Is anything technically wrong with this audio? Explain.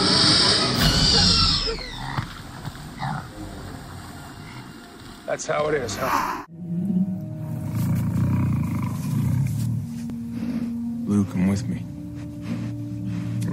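Yes. There is an overlap between stream segments at 4.11 s and again at 10.10 s, 6 seconds apart, which matches 6-second segment boundaries. The time stamps of adjacent segments overlap, so the player trims away about 5 to 6 ms of sound that was never actually duplicated. Each one is a brief click or tiny skip. On a waveform it shows as an abrupt jump, and on a spectrogram as a thin vertical broadband line.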